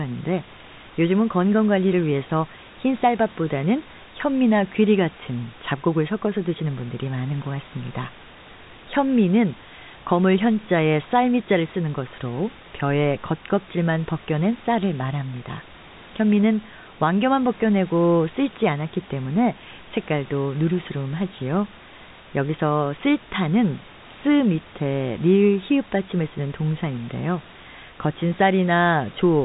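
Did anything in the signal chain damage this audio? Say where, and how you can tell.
No, nothing in the chain has damaged this speech. The room noise sits about 21 dB below the voice, and the band stops near 3.8 kHz, as expected for a call carried in G.711 telephone coding.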